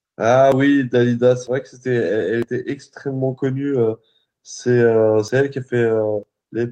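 Speech with brief skips at 0.52, 1.47, 2.42, 3.38, 5.28 and 6.23 s, each losing roughly 50 ms with the two sides butted together. This is likely audio missing between chunks of about one second. Waveform and spectrogram show abrupt seams with no silent gap.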